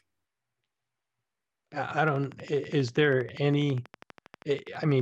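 A train of clicks runs from 1.91 s to 5.01 s, a steady ticking at 12.3 clicks per second with regular spacing, some forty pulses in all. Each click has much the same sharp shape and peaks at roughly the level of the speech itself, so the ticking stays plainly audible over the talking and through the pauses between phrases. The cause is likely interference from nearby equipment or a faulty connection or power supply.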